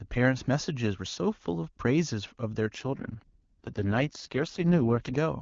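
An AMR rate drop runs from 2.73 to 5.18 s in this speech recording. The audio turns rough, raspy and synthetic, which fits the wideband codec falling from its 23.85 kbit/s top rate to 6.6 kbit/s on a weak link. The bandwidth stays the same, with no gap.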